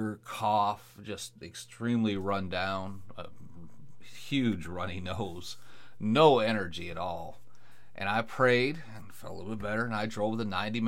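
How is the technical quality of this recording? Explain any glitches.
The recording has one fault: a DC step at 2.16 s. At that moment the waveform's zero line jumps to a new resting level, offset by about -41 dBFS. The offset holds until the end of the clip. A converter recalibrating or a source with an offset being switched in would shift the baseline like this. The sudden jump is heard as a single low thump. The speech itself continues unchanged through it.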